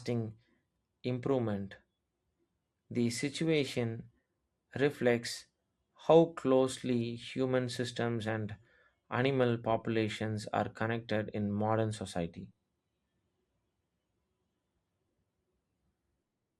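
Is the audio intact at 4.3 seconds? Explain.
No, at 4.3 seconds the speech sounds dull and gurgling with granular distortion, as it does throughout; likely MP2 compression at a bitrate near 80 kbps, switching off upper sub-bands and coarsely quantising the rest.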